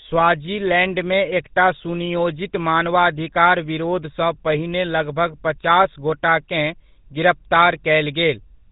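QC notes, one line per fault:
Throughout, GSM full-rate codec. The speech has a plainly audible buzzy, gravelly roughness. The codec models the vocal tract as a filter. It excites that filter with a sparse, regular pulse train and discards most of the excitation detail, so the natural fine structure turns coarse and rasping. Nothing is present above 3.8 kHz, which leaves the top end dull and closed-in. The character fits a 13 kbps GSM full-rate encode.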